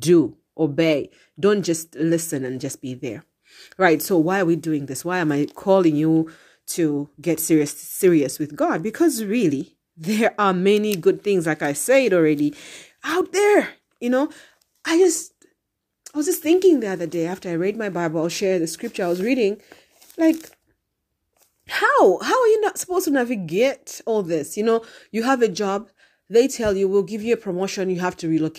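No technical faults can be heard anywhere in the speech recording. There is nothing to place on a timeline.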